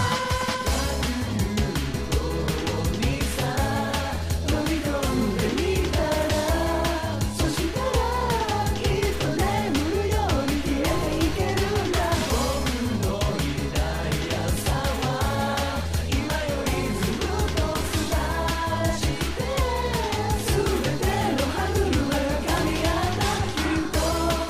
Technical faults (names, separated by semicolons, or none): none